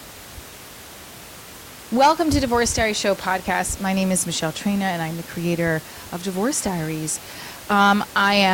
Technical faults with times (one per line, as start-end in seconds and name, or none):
none